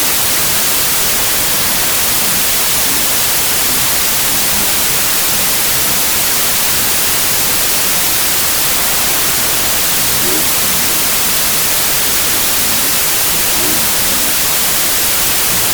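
From start to end, the clip has a wrong sample width fault. The audio was written as 32-bit integers but read as 16-bit. Each true sample splits into two values. The upper half keeps the signal's top bits. The lower half is close to random. So loud hiss swamps the speech, which is buried in it. Doubling the sample count plays everything at 0.5 times speed, an octave lower in pitch.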